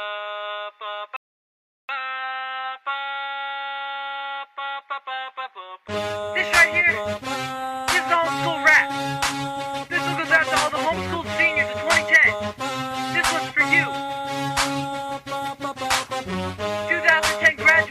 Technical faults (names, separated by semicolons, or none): rebuffering stall; hard clipping